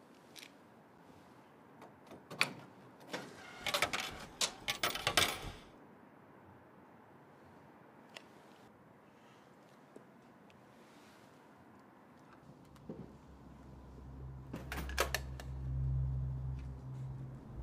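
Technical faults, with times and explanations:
0.98 s, block of digital silence: an 8 ms run of samples went to zero, pointing to an output buffer left unfilled in time. The sound cuts straight to silence and back with no fade, so both hard edges merge into one tick, too brief to hear as a gap.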